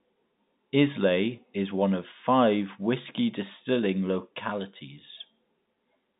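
No faults found: speech carried over G.711 telephone coding, band-limited to about 150 Hz–3.7 kHz, as that line format implies.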